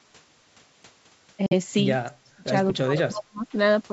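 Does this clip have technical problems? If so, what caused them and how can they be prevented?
Yes. At 1.46 s the speech drops to silence for about 46 ms, ending at 1.53 s, and then resumes as though it had kept playing through the gap. This is a Bluetooth dropout: audio packets likely failed to reach the headphones in time and were discarded, so the output went silent until valid data arrived again. A gap of this length fits two lost frames. To prevent it, keep the headphones close to the source with a clear line of sight and reduce 2.4 GHz interference from Wi-Fi or other nearby radios.

From 2.12 to 2.44 s and again from 2.83 to 3.54 s, the talker's level sinks sharply, at its deepest by about 40 dB. This is speech suppressed in double talk. Both sides were likely talking at once, and the echo canceller could not separate this talker from the loudspeaker echo, so it attenuated everything. 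To prevent it, use a headset instead of an open speaker so that less echo reaches the microphone, or use a device with a better full-duplex echo canceller.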